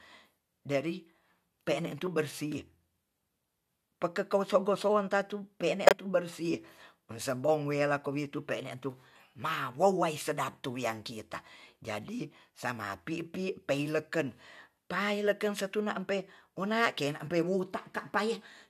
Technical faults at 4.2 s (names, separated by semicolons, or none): none